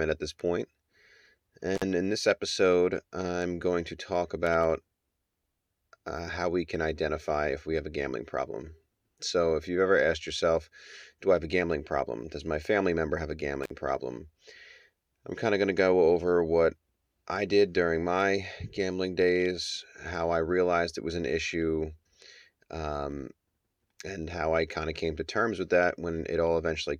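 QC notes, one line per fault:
1.75–1.83 s, intermittent contact: a loose connection opens for about 48 ms just before "in this episode I'm"; the sound drops out or breaks up, with crackle at the edges, showing as a brief waveform gap bracketed by vertical broadband streaks on a spectrogram.
13.63–13.70 s, intermittent contact: right after "family member have a", the line opens again for about 48 ms, giving the same dropout or break-up with crackle at each edge, seen as a narrow gap framed by broadband click lines.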